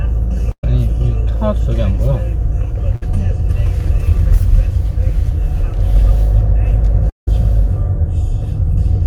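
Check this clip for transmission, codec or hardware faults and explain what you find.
Three transmission faults interrupt this recording of everyday sounds: two short bursts of packet loss and one longer gap that is likely a network dropout.

Burst of packet loss at 0.51 to 0.64 s, and again at 2.96 to 3.03 s. Consecutive packets never arrived in time, so the receiver stretched the last sound and faded it. The first gap loses about 120 ms and fades to silence for its final 60 ms. The second loses about 50 ms before the sound resumes further on.

Long network dropout at 7.10 to 7.28 s is the likely cause of the third gap. About 180 ms of audio is missing. The concealment holds the last sound briefly, then the output fades to near silence for roughly 150 ms before the sound returns, with the missing section skipped.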